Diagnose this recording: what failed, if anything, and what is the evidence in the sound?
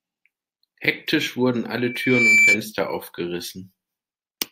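An acoustic loop closed between a loudspeaker and the microphone feeding it, on the analogue side of the chain, producing loudspeaker feedback squeal. From 1.76 s to 2.61 s a single tone near 2.3 kHz rises over the speech, swelling for roughly half a second before it settles at around 10 dB above the speech. At that frequency the round-trip gain through speaker, room and microphone exceeded one, so the tone fed itself and kept growing until it was limited.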